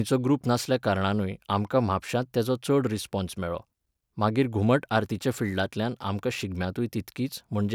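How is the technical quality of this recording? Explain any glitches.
Nothing here calls for explanation, as the speech comes across without any technical glitches to point to.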